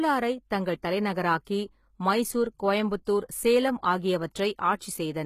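HE-AAC compression runs through the whole speech clip: the treble is likely rebuilt by spectral band replication rather than coded, so sibilants sound gritty and metallic, nothing reaches above about 14.9 kHz, and the damage is plainly audible, which fits a very low bitrate around 20 kbps.

Pre-echo appears at 0.82 s, from 1.45 to 1.47 s, and at 3.05 s, spreading 13, 21 and 18 ms ahead of sharp attacks. Quantisation noise spread across a transform block spills into the silence before each onset, leaving a brief hiss and a softened attack.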